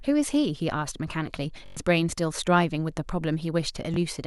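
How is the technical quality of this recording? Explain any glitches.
The speech has two Bluetooth stutter glitches. From 1.66 to 1.77 s, lost packets make the receiver loop its last slice, giving a short buzz. At 3.94 to 3.97 s, one slice repeats.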